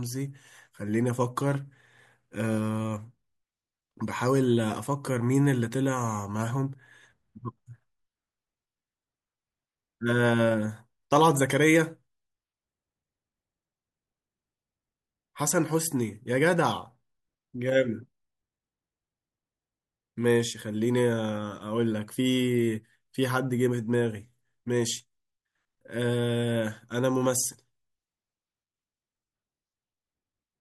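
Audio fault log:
No fault to log; none is heard anywhere in the speech.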